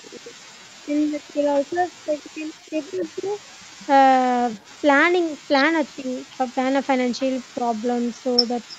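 Right at the start, 0.0 to 0.35 s, and again from 0.84 to 3.39 s, the sound dips hard, by up to about 35 dB and then about 25 dB, most likely speech suppressed in double talk. The canceller ducked its own talker along with the loudspeaker echo while both ends talked. There's also likely an echo leak: a faint delayed copy, about 351 ms behind and roughly 30 to 40 dB down, at 1.71–1.76, 2.91–3.62 and 4.57–4.65 s. Shorter suppression dips follow at 5.98–6.16 s (about 15 dB) and 7.57–7.7 s (about 10 dB). Throughout, the band tops out at 8 kHz from the Opus call path.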